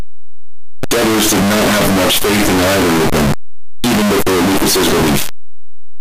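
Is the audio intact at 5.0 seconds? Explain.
No. At 5.0 seconds, as everywhere in this speech clip, the sound is a very loud, harsh, buzzing distortion in which even the quiet stretches are as loud as the rest. This is likely a case of signed and unsigned mixed up: the 8-bit samples are read with the wrong signedness, so the top bit flips and every zero crossing turns into a jump across the whole range.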